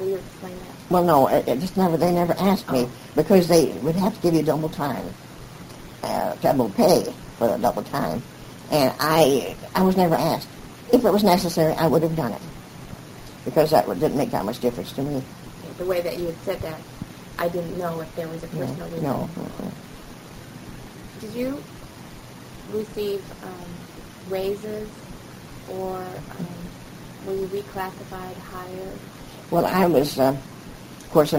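A brief burst of noise at 11.52 s is DAB burbling: residual bit errors, under a tenth of a percent, slipped past error correction and corrupted sub-band data for a moment.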